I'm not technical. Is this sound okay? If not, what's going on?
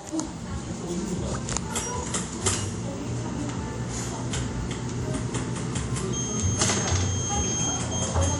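No. Throughout the clip the sound rings and smears, with a hiss that swells and fades along with it, and nothing above 17 kHz. This is plainly audible WMA compression, likely saved at a low-quality setting that blurs fine detail.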